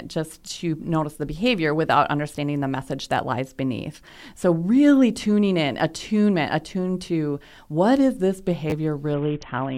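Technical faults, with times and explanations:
8.70 to 8.72 s, repeated buffer: Right after "to what is this", new audio failed to reach the output in time, so the device replayed the piece it already held. A tiny slice of speech, short enough to fit a 10 ms buffer, sounds three times in a row with a hard join at each repeat. Because the slice is so brief, this comes across as a quick click or buzz rather than an obvious stutter, and roughly 20 ms of real speech is lost.
9.14 s to the end, Bluetooth SBC bit pool drop: The wireless link appears to have come under pressure, and the sending device cut the SBC bit pool sharply to keep audio flowing. The sound fits a fall from a normal setting around 28 down to about 5, near 54 kbps. With so few bits, the upper sub-bands get almost nothing and the remaining bands are coarsely quantised, so the speech turns dull and muffled with a gritty, grainy noise. 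The clip ends before the rate recovers.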